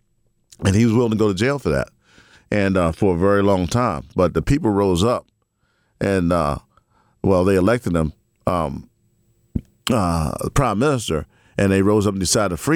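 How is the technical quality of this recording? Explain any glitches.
No glitches can be heard in this recording; nothing in it points to a technical fault.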